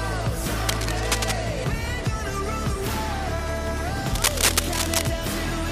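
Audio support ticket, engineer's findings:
Cable scratch noise, 0.69–1.32 s and 4.14–5.11 s: dense, uneven scratching bursts, first somewhat below signal level, second about as loud. Likely a worn cable or connector being moved. Spectrogram: ragged broadband vertical smears; waveform: jagged spiky clusters riding on the signal.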